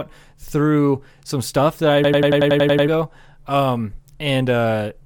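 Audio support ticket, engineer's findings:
System hang loop, 2.04–2.88 s, just after "some stuff that I". A 92.9 ms fragment repeats nine times at 10.8 Hz, a machine-gun stutter. Likely a driver/host stall while the audio device kept replaying its ring buffer, consistent with a 4096-sample buffer. About 0.7 s of audio is lost.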